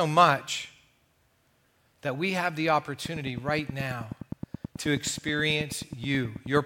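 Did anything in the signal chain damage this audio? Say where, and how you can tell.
Yes. From 3.06 s to 6.58 s a train of clicks runs over the speech: about 30 near-identical ticks at a steady 9.4 per second, peaking about 10 dB above the speech and persisting through the pauses. That regular pacing and uniform shape point to a periodic pulse entering the chain rather than anything in the recorded content, most likely interference coupling into the analogue wiring or a faulty connection or power supply.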